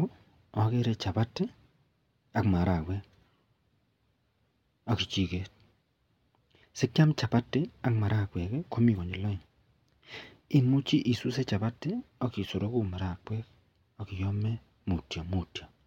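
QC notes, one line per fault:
Nothing stood out on listening to this speech recording.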